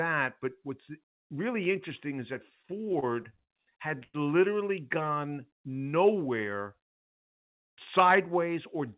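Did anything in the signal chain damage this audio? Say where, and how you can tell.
Yes. The damage comes from the network and jitter-buffer stage of a call path. The audio is band-limited with nothing above 4 kHz, which points to a narrowband G.711-type codec.

Repeated stalls (stutter) run from 2.62 to 3.52 s, right after "really interesting is that". There are ten short hitches, the longest 60 ms, totalling about 175 ms. The jitter buffer kept running dry and the receiver stretched the last sound each time, so the sound drags without losing content.

A call audio freeze occurs from 4.03 to 4.16 s, just before "literally gone". The last sound is held and fades for about 108 ms, ending in roughly 30 ms of silence. Playback then resumes where it stopped, adding the same delay. The cause is likely packets held up in the network.

A jitter buffer speed-up spans 6.55 to 8.27 s. The audio plays at 104% speed with unchanged pitch. 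The receiver trimmed pitch-period slices, about 70 ms in all, to shrink an overfull buffer, so this stretch runs slightly faster.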